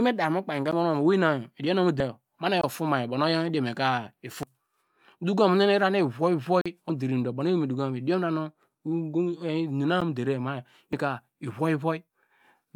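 At 0.72 s the speech drops to digital silence for about 11 ms. This is a block of digital silence. The output buffer likely went unfilled in time, so zeros went out instead. The length fits a 512-sample buffer. The cut has no fade, so it lands as a sharp tick.

At 2.00 to 2.03 s comes a blip of damaged data in a compressed stream. Corrupted bytes made the decoder misread frames and lose sync until it found the next frame header.

At 2.61 to 2.64 s a second silent block runs about 21 ms, fitting a 1024-sample buffer. It is heard as a brief hole.

At 4.43 to 4.46 s the same blip of damaged stream data returns.

At 6.61 to 6.66 s the longest dropout lasts about 43 ms, which fits a 2048-sample buffer. A short hole is heard.

At 6.90 to 6.93 s a corrupted-stream blip follows closely.

At 10.01 s an 11 ms block of silence gives another tick, again matching 512 samples.

At 10.93 to 10.96 s a final blip of damaged compressed data closes the pattern.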